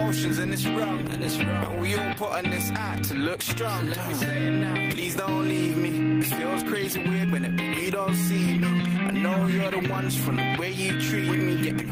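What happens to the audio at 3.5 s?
Gain pumping is present at 3.5 s, as it is throughout the clip. The level keeps ducking under each loud sound and climbing back in the gaps, swinging by around 10 dB, so loud and soft parts sit closer together and the sound feels squashed. This likely comes from input gain set far too high for the microphone, with a fast limiter or compressor pulling the level down whenever the sound gets loud.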